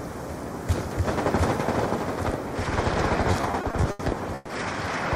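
Packets arrived late between 3.31 and 4.52 s, emptying the jitter buffer eight times, so this repeated stalls (stutter) section drags, with about 340 ms of held sound filling the gaps.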